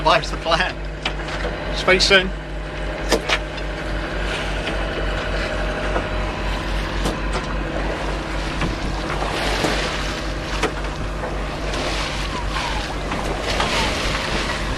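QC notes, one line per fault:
Throughout: mains hum. A steady low tone at 50 Hz sits under the whole clip with a few low harmonics stacked above it. It is loud, roughly 5 dB below the wanted signal, which points to a ground loop or a nearby transformer feeding the power line into the signal path. On a spectrogram it appears as an unbroken horizontal line at 50 Hz with fainter lines at its multiples. The waveform carries a constant low-frequency ripple even in gaps.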